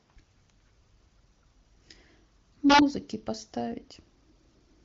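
Integer overflow strikes from 2.70 to 2.79 s. The speech peaks here exceed the integer limit by about 2 dB, and instead of being held at full scale those samples wrap to the opposite sign, producing harsh, abrupt cracks far sharper than ordinary clipping. The AMR-WB coding itself stays clean, with nothing above about 7.3 kHz.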